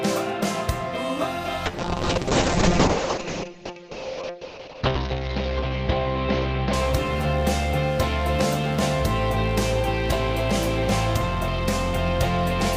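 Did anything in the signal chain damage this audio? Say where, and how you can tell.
Yes. A call bitrate drop runs from 1.67 s to 8.03 s, at the call's codec stage as the network's bandwidth estimate collapsed. The encoder fell from a full-rate setting to a very low rate, which fits roughly 6 kbps, and held its lowest setting for about 3.3 s. The audio band narrows from 20 kHz to 8 kHz, so the top end goes muffled, and the coarser coding leaves a rough, watery texture until the bitrate recovers.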